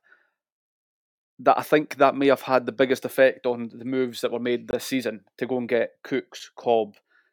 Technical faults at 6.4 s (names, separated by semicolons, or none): block of digital silence